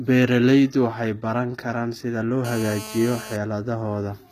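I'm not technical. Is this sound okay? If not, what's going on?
No. Two faults can be heard in this speech recording.

Throughout, the sound has the character of HE-AAC compression, which is the likely cause. That kind of encoder keeps only the lower part of the sound in full and fakes the treble by copying lower parts upward. Here that gives s sounds and other crisp consonants a gritty, metallic or lisping edge, and nothing at all is present above about 14.9 kHz.

From 2.45 to 3.36 s, just after "baran karaan sida loo", a GSM phone buzz appears. A nearby mobile phone on a call sends radio pulses about 217 times a second, and the recording equipment picks them up as sound. The result is a harsh, raspy buzz at 217 Hz. It stays steady while it lasts and has no connection to the speech underneath.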